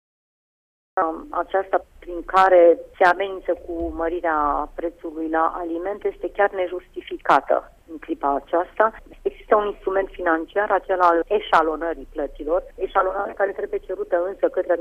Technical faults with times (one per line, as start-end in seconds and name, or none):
0.00-0.97 cut-off start